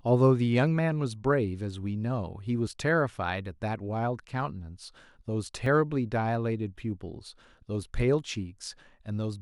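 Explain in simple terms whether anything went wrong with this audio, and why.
The recording was likely processed in three-second chunks, and a tiny sliver of sound, a few thousandths of a second, went missing at each handover. This is audio missing between chunks, heard as brief skips in the speech at 2.67, 5.66 and 8.66 seconds.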